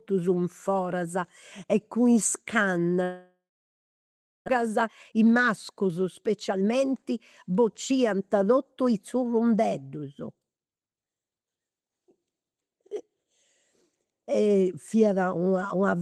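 This speech clip has two faults. A long network dropout is the likely cause of the gap from 3.03 to 4.50 s: the receiver stretches the last sound into a fading buzz, then leaves about 1.03 s of silence, and about a second of speech never returns. A jitter buffer speed-up follows, trimming repeated pitch-period slices to drain excess delay, so from 4.57 to 9.23 s speech runs hurried at 109% speed with unchanged pitch, losing roughly 0.4 s. The call path itself, which sounds consistent with Opus limited to 12 kHz bandwidth, adds only its ordinary coding noise.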